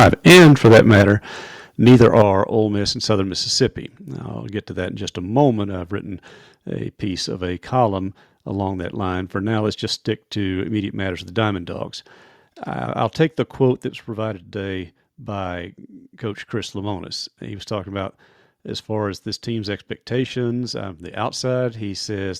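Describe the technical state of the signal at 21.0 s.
At 21.0 s the speech signal is intact, with no audible dropout, distortion or other fault at that moment.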